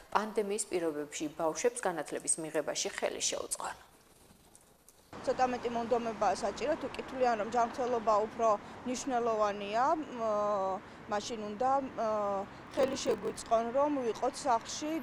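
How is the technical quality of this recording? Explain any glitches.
The recording has one glitch, a block size mismatch (padded), from 12.63 to 13.48 s. One stage hands over blocks about 6% shorter than the next stage reads, and the remainder of each block is filled with silence. A tiny gap recurs at 43.1 Hz, which fits a 1024-sample read block, giving a steady buzz. The audio also slows to 0.938 of normal speed while its timbre stays the same. That regular rate and unchanged timbre set it apart from random underrun dropouts or a resampling error.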